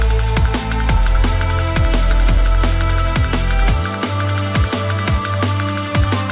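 Nothing goes wrong anywhere in this one: the sound comes through an ordinary call line with the narrow, phone-like character of G.711 A-law and nothing above 4 kHz, and there's nothing to point to along the way.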